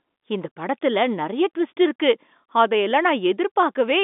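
The speech comes over a standard G.711 telephone line, with the sound confined to roughly 200 Hz to 3.6 kHz, and no technical faults can be heard in the clip.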